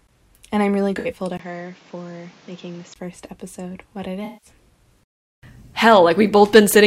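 Speech with two kinds of fault. After "I'm really", 0.99 to 1.07 s, and again after "first episode what it", 4.25 to 4.50 s, comes AAC frame loss with concealment: smeared, phasey patches of roughly 64 and 171 ms (fitting three and eight lost frames), filled from the last good spectrum rather than cut to silence. From 1.37 to 2.96 s, just before "first episode what it", the sound turns dull and quieter, likely an input switched to a poorer device. A 20 ms gap opens it, nothing passes above 7.6 kHz, level drops about 5 dB, and a new noise floor sits roughly 30 dB down. These shifts in level and noise, not bandwidth alone, set it apart from a codec change.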